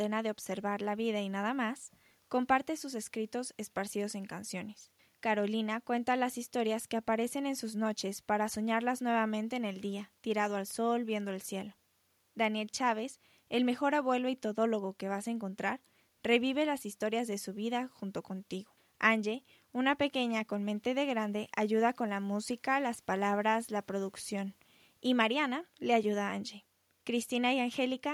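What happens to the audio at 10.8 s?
Nothing goes wrong at 10.8 s; the speech plays through that moment intact, with no dropout, click or distortion.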